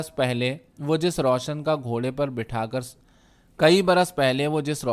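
Speech recording with no audible technical faults.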